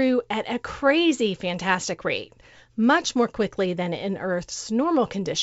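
The speech carries no technical fault, and its bandwidth fits G.722 wideband telephone coding in the 64 kbit/s mode.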